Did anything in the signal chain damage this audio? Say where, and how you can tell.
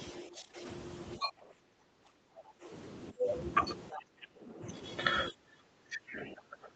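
Yes, the damage sits in the call processing stage, at the echo canceller.

Speech suppressed in double talk: the talker's voice sinks by roughly 15 to 25 dB and turns dull or broken at 0.12–0.63 s, 1.17–2.71 s, 3.11–3.27 s, 3.92–4.63 s and from 5.31 s to the end. The likely cause is the canceller mistaking overlapping talk for echo and attenuating everything.

The other side's voice leaking through: brief fragments of a second voice appear at 3.92–4.02 s, 4.21–4.27 s and 6.07–6.29 s, sitting about 5 to 15 dB under the talker. Loudspeaker playback likely reached the microphone, and the canceller failed to subtract all of it.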